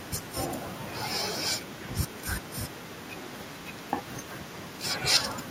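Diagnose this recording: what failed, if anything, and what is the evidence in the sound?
Echo leak in call processing: a faint discrete copy trails by 307 ms at 0–0.89, 1.61–2.24, 2.4–4.83 and 5.34–5.5 s, unlike diffuse reverb, likely far-end echo-canceller leakage.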